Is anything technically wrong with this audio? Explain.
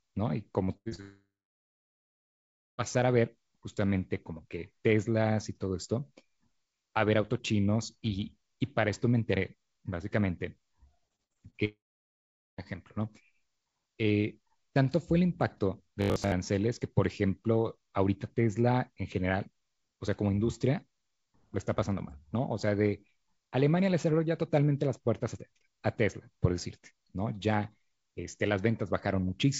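Yes, the speech is broken up by network faults in three places, heard over a call path whose codec leaves nothing above 8 kHz, which fits G.722 at 64 kbps.

Repeated packet loss (robotic sound) occurs from 0.65 to 1.01 s and again from 11.08 to 11.56 s. Packets went missing in quick succession: four holes in the first stretch (longest 82 ms, about half the span patched) and five in the second (longest 56 ms, about a third patched). Each hole is filled by stretching the preceding sound, so the speech turns choppy and metallic. On a spectrogram, smeared, frozen harmonic bands alternate with normal speech. In the waveform the envelope looks stuttering and repetitive.

A long network dropout follows directly, from 1.01 to 2.81 s, and a second one runs from 11.65 to 12.61 s. The likely cause is a stretch where no audio reached the receiver at all. The last sound continues briefly as a fading buzz. 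Then comes near-silence, about 1.5 s in the first case and 0.8 s in the second, before speech resumes with that portion simply gone. The waveform shows a flat line, and the spectrogram shows a dark, empty block.

Robotic sound from repeated short buffers appears from 16.02 to 16.34 s. Most of the audio in that span is replaced by a loop of the last 20 ms, likely because fresh audio arrived too rarely and the same short buffer was replayed to fill time. The repetition imposes a rigid 50 Hz buzz that only loosely follows the speech. A spectrogram shows evenly spaced horizontal lines at multiples of 50 Hz. In the waveform, identical 20 ms cycles repeat.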